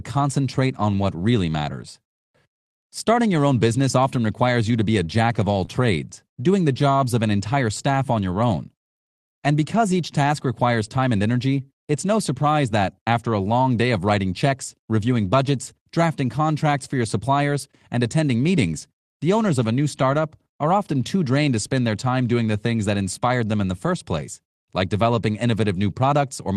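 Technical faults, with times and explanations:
5.65–5.70 s, short concealed packet loss: about 20 ms of the speech stream arrived too late for the decoder, which covered the hole by extending the preceding sound for roughly 22 ms and then crossfading back into real audio. It comes across as a brief smear or wobble rather than silence. On a spectrogram the sound holds unnaturally steady for a sliver of time; the waveform shows no dropout to zero.
5.68–5.70 s, 12.86–12.88 s, 20.12–20.14 s and 25.14–25.16 s, lost packet rebuilt from error correction: at each point a single 20 ms packet went missing, and the decoder played the lower-bitrate backup copy carried in the following packet, so there is no gap. Those four frames sound grainier and noisier. A spectrogram shows a thin vertical strip with blurrier harmonics and more diffuse noise, and the waveform stays continuous with a texture change.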